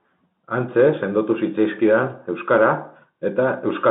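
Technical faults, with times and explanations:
Nothing here counts as a technical fault, just speech carried over an ordinary G.711 telephone line, with the sound sitting in the usual phone band of about 150 Hz to 3.7 kHz.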